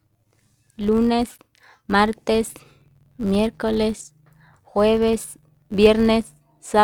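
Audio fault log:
Throughout, filter restarted on every block: a steady buzz of small ticks at about 93.8 Hz rides under the speech and swells and fades with its level. The filter drops its state and starts each block from silence, which fits a 512-sample buffer.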